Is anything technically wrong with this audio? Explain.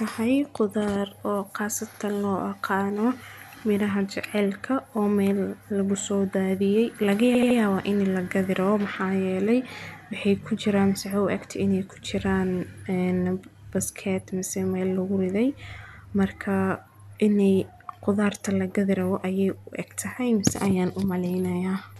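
Yes, there are repeated frames in this speech. At 1.94 s, between "qudaar oo" and "loo oqaano", a 52 ms chunk plays twice, which fits two compressed frames being resent. At 7.34 s, after "lagu soo daadiyay laga", a 78 ms chunk loops three extra times, adding 235 ms. Each one sounds like a quick stutter as the decoder replays the same slice.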